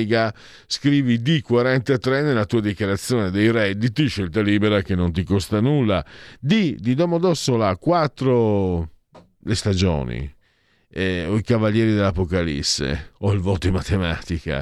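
Nothing goes wrong anywhere in this speech recording, so there's honestly nothing here to point out.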